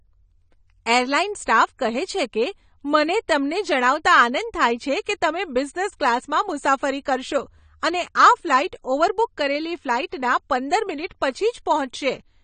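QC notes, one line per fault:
Throughout, AAC compression: the speech is dull and smeared, with nothing above 9 kHz, likely from AAC-LC coding at a low bitrate near 32 kbps.
10.10–10.12 s, pre-echo: a short hiss runs 26 ms ahead of a sharp onset, as block-wide quantisation noise leaks into the quiet moment before it.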